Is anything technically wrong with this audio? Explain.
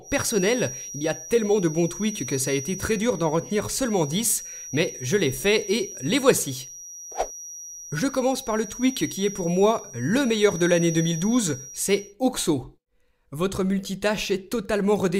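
Yes. From 0.0 to 12.16 s a thin, steady feedback whistle near 5.8 kHz sits roughly 15 dB beneath the sound, swelling and fading slowly in level. It is likely a loudspeaker-to-microphone loop held just at the edge of feedback, sustaining one tone without escalating.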